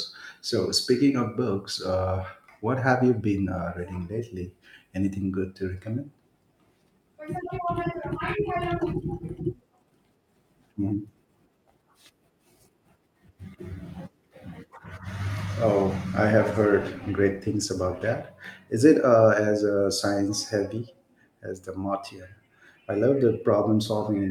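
From 16.26 to 18.41 s there's a call bitrate drop: the speech turns coarse and muffled, which fits the encoder falling from about 64 to 26 kbps before recovering.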